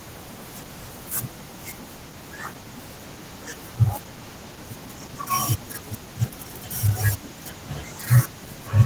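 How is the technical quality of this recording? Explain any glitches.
The recording has one fault that runs through the whole clip. Throughout, the speech sounds hoarse and slightly robotic. This is Opus voice compression in hybrid mode, consistent with roughly 16 kbps: linear prediction codes coarsely below 8 kHz and a thin transform layer covers the rest up to about 20.5 kHz.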